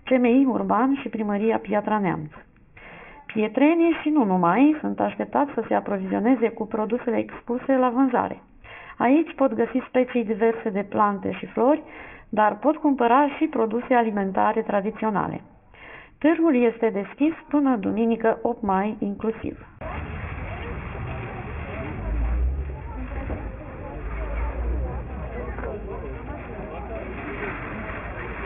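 The audio carries aliasing from start to finish: its sample rate appears to have been cut sharply, which fits a drop from 48 kHz to 6 kHz, with no filter removing content above the new limit first. Everything that lay above 3 kHz has folded back down into the band as false, inharmonic tones, roughly 20 dB below the real sound, giving a gritty, metallic edge. On a spectrogram the energy runs hard up to 3 kHz, with mirrored streaks sloping the wrong way.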